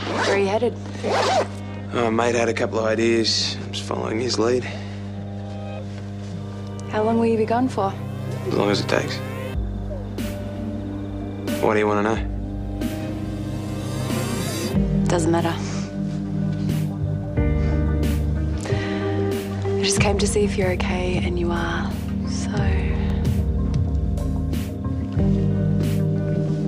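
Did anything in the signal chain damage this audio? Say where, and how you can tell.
Yes. A steady low 50 Hz tone with some low harmonics sits under the sound for the whole clip, quite loud, only a little below the programme level. This is mains hum from the analogue wiring: a ground loop or nearby transformer coupling the power line into the signal.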